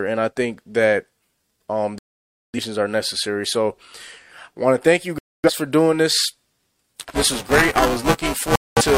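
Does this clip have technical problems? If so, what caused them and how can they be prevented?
Yes. There's a digital broadcast dropout three times in this speech: 1.98 to 2.59 s, right before "are necessary"; 5.18 to 5.51 s, between "want to thank you" and "for doing this"; and 8.56 to 8.82 s. Each time the receiver mutes until clean frames return. Stronger reception or more robust error protection would prevent this.

From 6.93 s to the end there's buffer tearing, a robotic 345 Hz buzz that fits a 128-sample buffer. Writer and hardware have drifted, so around a fifth of each period replays audio about 10 ms old. A larger buffer or fixing the scheduling would stop it.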